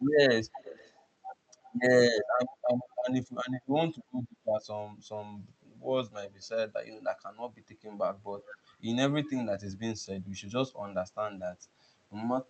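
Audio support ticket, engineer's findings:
Echo leak, 0.56 to 1.06 s: faint delayed copy of the speech trailing the original by about 348 ms, well below the direct voice. Likely far-end speakerphone with its echo canceller letting residual pickup through and sending it back. Call-codec band limit near 8 kHz audible throughout.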